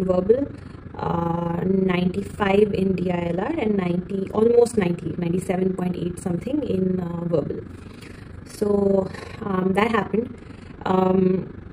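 Frames were windowed and overlap-added with a mismatched overlap, producing overlap-add ripple throughout: the level pulses about 11 dB roughly 30 times a second, a rough flutter.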